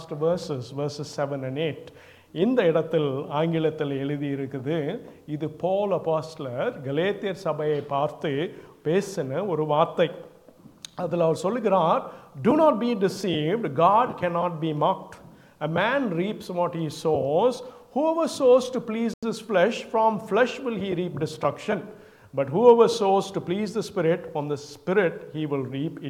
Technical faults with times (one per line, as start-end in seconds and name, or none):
19.14-19.23 Bluetooth stall